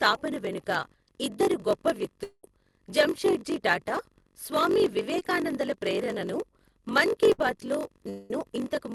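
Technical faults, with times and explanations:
Throughout, block size mismatch (padded): each block is cut short and zero-filled, which fits a 1024-sample read. This causes a 46.9 Hz buzz and slows playback to 0.938 times speed.
2.23–2.44 s, long network dropout: after "వెనుక ఇద్దరు గొప్ప", the last sound continues as a fading buzz or hiss, then goes briefly silent. This is likely a network dropout. About 200 ms is lost before "జంషెడ్జీ టాటా స్వామి".
5.19–5.21 s, short concealed packet loss: about 10 ms never arrived. The receiver extended the preceding sound and blended it back, leaving a brief smear or wobble.
7.32–7.40 s, burst of packet loss: between "ప్రేరణను మన్ కీ" and "బాత్ లో", about 60 ms is missing. The last sound is held and faded, which gives a short buzz or hiss.
8.10–8.31 s, long network dropout: after "మన్ కీ బాత్ లో", about 200 ms is replaced by a continued, fading sound with no silent stretch. 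This is likely a network dropout.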